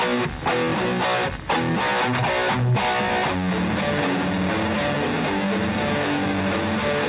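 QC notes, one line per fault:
No faults were found in this music clip. It has come over a WebRTC call path, and nothing sounds above 4 kHz, which fits a narrowband codec such as G.711 mu-law at 64 kbps.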